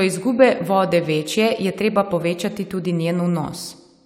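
No technical faults can be heard anywhere in this speech recording.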